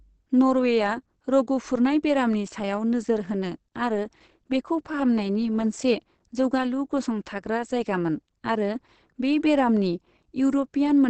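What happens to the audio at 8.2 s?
At 8.2 s the speech carries the Opus compression heard throughout, likely from a low-rate encode around 16 kbps that pushed the codec into its SILK speech mode. Nothing reaches above about 8.4 kHz, so the speech sounds muffled, hoarse and plainly damaged.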